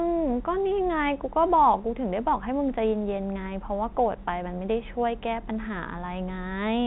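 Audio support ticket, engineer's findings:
No faults found on listening. The G.711 telephone path sounds as expected: nothing above 4 kHz, with only a faint noise floor tracking the speech level.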